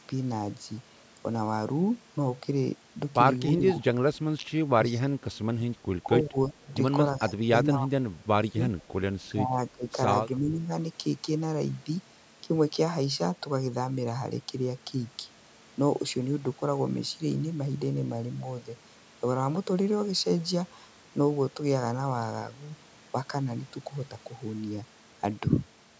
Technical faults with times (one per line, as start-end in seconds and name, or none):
3.53-3.84 speech suppressed in double talk
3.70-3.76 echo leak
4.78-5.63 speech suppressed in double talk
6.02-6.68 speech suppressed in double talk
6.68-6.75 echo leak
7.18-8.71 speech suppressed in double talk
9.29-9.87 speech suppressed in double talk
10.39-10.71 speech suppressed in double talk